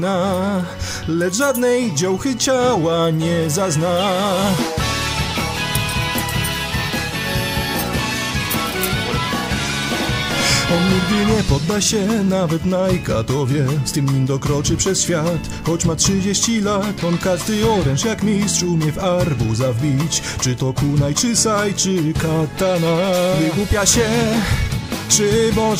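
Processor overload crackle appears from 5.22 to 5.40 s as a short, gritty burst of tearing laid over the sound. The processing could not finish its small buffers in time, and a run of deadlines was missed back to back. Each missed buffer was simply skipped, leaving a hard-edged gap. The spacing of the clicks points to buffers of only a few milliseconds, with around ten dropped during the overload before it clears.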